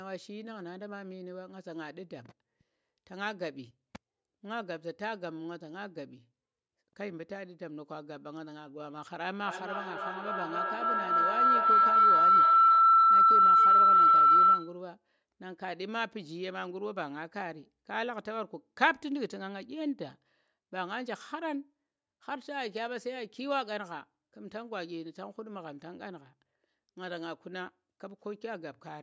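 From 9.44 to 14.86 s, a feedback howl takes over the speech. Sound loops from loudspeaker back into a microphone, gaining level each pass. It narrows to a tone around 1.5 kHz, with the loop repeating roughly every 300 ms, and peaks about 15 dB above the speech.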